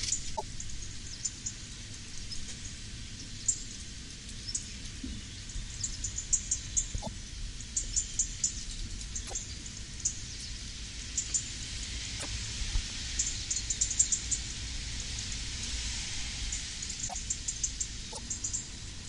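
At 0.35, 7.02, 9.26, 12.19, 17.07 and 18.12 s the audio jumps ahead, and each time roughly 70 ms of chirp, burst of noise or short hole follows. That's likely a broken MP3 bit reservoir: frames were cut out, so the frames just after each cut reached back for borrowed data and decoded someone else's bytes. With 26.1 ms frames, each glitch spans about two or three frames before the decoder recovers.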